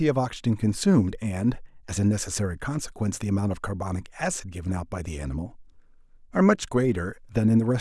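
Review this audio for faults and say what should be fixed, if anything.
No faults detected in the speech; nothing to fix.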